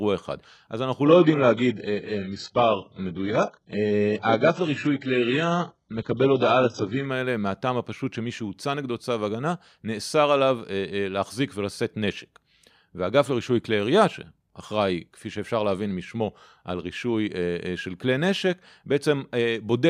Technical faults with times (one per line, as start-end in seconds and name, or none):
1.06-7.06 adaptive stream at a lower bitrate